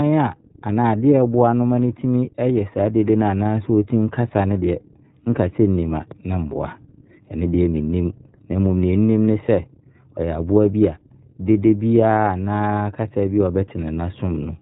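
Speech here, run through the iLBC codec the whole way: nothing above 4 kHz, plainly rough, synthetic texture, and a grain that fits 30 ms frames at around 13 kbps.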